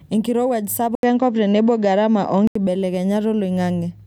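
A speech clip in which the recording input was likely switched to a poorer device from 0.95 s to 2.55 s. After a brief 80 ms silence at the switch, nothing is left above 7.6 kHz, the level shifts by around 5 dB, and a faint new noise floor sits well below the speech.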